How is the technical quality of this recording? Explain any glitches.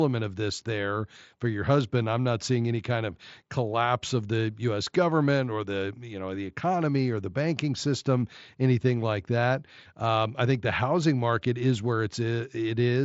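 No glitches can be heard: the speech comes through a Bluetooth mSBC headset link at 61 kbps, which caps the bandwidth at 8 kHz and leaves only a light graininess on the louder sounds.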